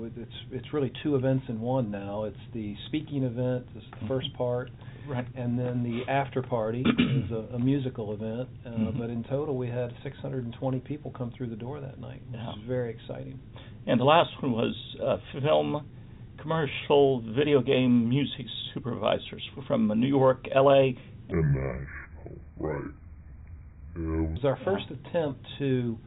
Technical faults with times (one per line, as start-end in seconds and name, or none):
21.32-24.36 section at the wrong speed